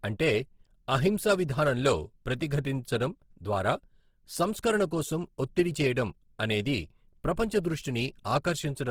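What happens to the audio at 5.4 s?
Opus compression is at work at 5.4 s, as it is throughout the clip. The likely cause is an encoder in its music mode at a low bitrate, consistent with roughly 16 kbps, keeping each band's energy but filling starved bands with folded or noise-like content. The speech sounds plainly rough and grainy while still reaching up to about 20.4 kHz.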